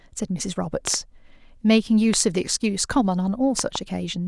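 Five loud pops land on the speech: a pair between 0.87 and 0.96 s, a single one at 2.14–2.16 s, and another pair between 3.59 and 3.78 s, each peaking roughly 15 dB above the speech, which continues underneath. The likely cause is a sudden voltage step or pulse, as from a switch, plug, static or driver glitch. On the waveform each is a tall spike. On a spectrogram each is a thin vertical broadband stripe.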